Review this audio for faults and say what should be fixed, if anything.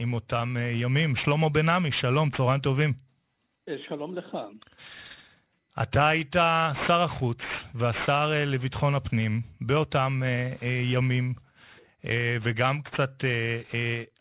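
There's aliasing running through the whole speech clip. The top end stops hard at 4 kHz, and the energy that belonged above that has folded back down into the band as gritty, metallic junk, roughly 15 dB below the speech itself. You hear it most on sibilants. That pattern fits a drop to an 8 kHz rate done without a low-pass filter first. To prevent it, resample with a proper anti-aliasing filter that cuts everything above 4 kHz before lowering the rate.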